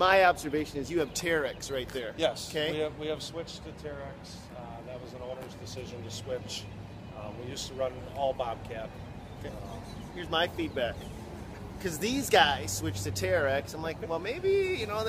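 No technical faults can be heard anywhere in the clip. The audio runs without any interruption, distortion or other problem from its opening moment to its close.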